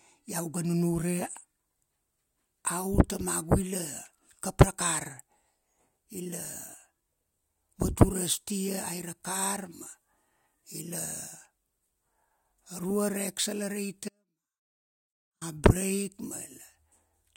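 A speech recording with an audio dropout to a faint residue from 14.09 s to 15.41 s, lasting about 1.3 s. The signal cuts out abruptly rather than fading or pausing, and during the gap only a faint leak of the sound remains, roughly 40 dB below its normal level. It then returns just as suddenly. The likely cause is a momentary loss of the wanted source while the downstream path stayed live.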